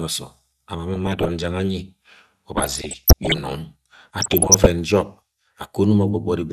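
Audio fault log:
0.94–1.30 s, 2.57–3.40 s and 4.19–4.66 s: DAB burbling. The first burst follows "osom ama mo" and ends before "jang anyi". Bit errors of roughly 0.5 to 1 percent slip past error correction. Wrong scale factors make sub-bands jump in level for up to a frame. Wrong samples make short blips of noise in single sub-bands.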